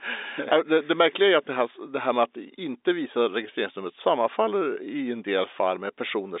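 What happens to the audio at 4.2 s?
Nothing goes wrong at 4.2 s; the speech carries on intact through that moment, with the narrow telephone band of the G.711 line unchanged.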